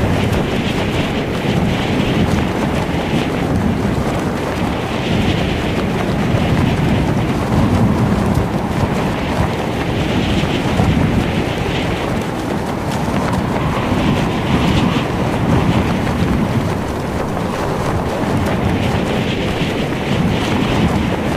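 No technical faults can be heard anywhere in this clip. The sound continues without any break, glitch or disturbance that points to something going wrong in how it was captured or carried.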